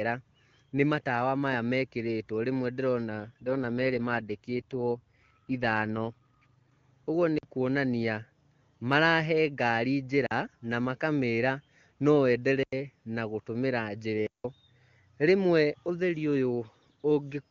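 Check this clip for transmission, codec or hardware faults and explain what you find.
Two kinds of fault are present in this speech clip: a stretch of reduced codec rate, and four short blocks of digital silence.

AMR rate drop, 3.11 to 6.70 s: the AMR wideband link falls from 23.85 to 8.85 kbit/s, most likely because a weak radio connection pushed the codec to give up speech bits for error protection. The voice roughens and turns synthetic while the bandwidth stays the same and nothing drops out. That separates it from a handover to narrowband, which would sound duller. At 23.85 kbit/s before and after, the codec sounds clean.

Blocks of digital silence at 7.38 to 7.43 s (about 46 ms), 10.26 to 10.31 s (46 ms), 12.63 to 12.73 s (93 ms) and 14.27 to 14.44 s (176 ms): the output drops abruptly to silence and returns with no fade. The first three lengths fit blocks of 2048 and 4096 samples, which points to a buffer that wasn't filled in time. 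The dead-flat floor and hard edges distinguish these from packet loss concealment, which fills a gap with smeared or repeated sound.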